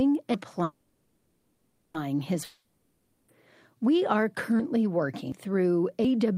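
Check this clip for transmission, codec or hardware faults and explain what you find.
The speech has three kinds of fault: skips, a stall, and a lost stretch.

At 0.34, 5.32 and 6.05 s, the audio jumps suddenly ahead, likely dropped buffers (overrun). Roughly 150, 150 and 40 ms of audio are skipped outright.

From 0.63 to 1.96 s, a fading buzz or hiss fills a 1.31 s stall, likely a call audio freeze. The jitter buffer ran empty, and the speech then resumes intact.

From 2.44 to 3.30 s, a decaying buzz or hiss covers 0.84 s, likely a long network dropout. That audio never arrived, so the speech resumes further on.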